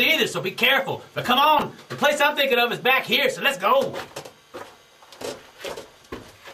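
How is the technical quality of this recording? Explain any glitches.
One glitch stands out. Chunks out of order at 1.59–1.62 s: a 10 ms block lands two chunks late, so the sound briefly jumbles across three hard joins.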